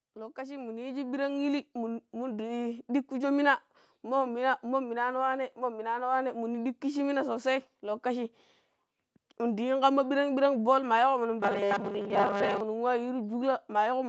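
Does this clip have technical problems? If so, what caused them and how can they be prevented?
Yes. From 0.05 to 2.98 s, automatic gain rising lifts the level by about 11 dB: the gain control judged the input too quiet and raised it gradually, so speech and background noise swell together. A correct fixed microphone level, or automatic gain control disabled, prevents this.

From 11.40 to 12.60 s the speech turns into a rigid, metallic buzz at 200 Hz that loosely tracks the words. The likely cause is robotic sound from repeated short buffers. New audio arrived too seldom, so most of that stretch is filled by repeating the last fragment while real audio is skipped. The 200 Hz buzz fits a 5 ms repeat length. Steadier audio delivery, with fewer scheduling stalls or a larger buffer, prevents this.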